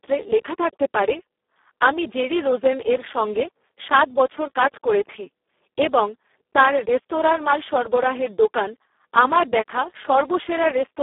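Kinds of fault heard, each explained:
Speex codec: a CELP speech codec at a very low setting, which fits a 4 kbps stream, has too few bits for the excitation, so the speech turns hoarse, noisy and robotic, held within a 300 Hz to 3.5 kHz band with nothing above 3.8 kHz.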